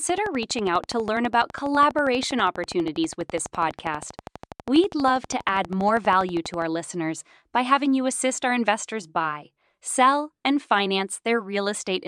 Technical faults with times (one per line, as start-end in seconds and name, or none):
0.09-6.63 train of clicks